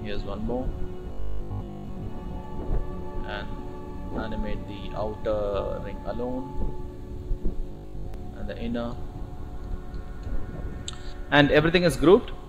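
From 1.12 to 2.08 s and 7.72 to 8.14 s there is robotic sound from repeated short buffers, a rigid metallic buzz at 50 Hz. The likely cause is audio arriving too seldom, so a 20 ms stretch is replayed, replacing most of the real signal.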